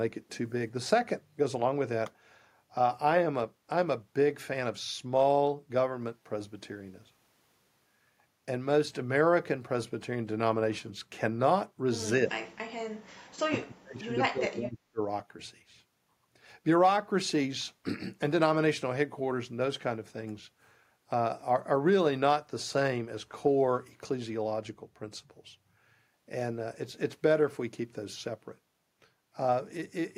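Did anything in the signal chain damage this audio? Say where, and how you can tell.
Yes. Speech suppressed in double talk, in call processing, at 12.28 to 12.63 s and again at 13.49 to 15.0 s. In both stretches the speech falls away sharply, by about 35 dB at its deepest, for roughly 0.4 seconds and then about a second and a half. The likely cause is the echo canceller meeting simultaneous talk from both ends, failing to tell this talker from loudspeaker echo, and attenuating everything it passed.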